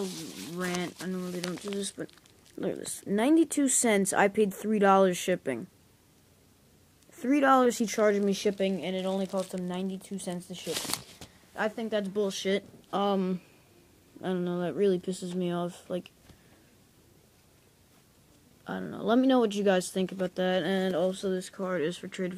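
A loud pop at 2.86 to 2.88 s, a single sharp click a few decibels above the sound, likely a voltage step from a plug, switch or static discharge.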